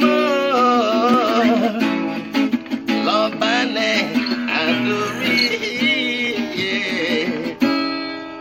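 A block of digital silence occurs at 1.14 s and again at 6.27 s: each time the sound drops out for about 0.73 ms, likely because the output buffer wasn't filled in time, a length that fits a 32-sample block. The abrupt cut and return make each one a brief tick or dip.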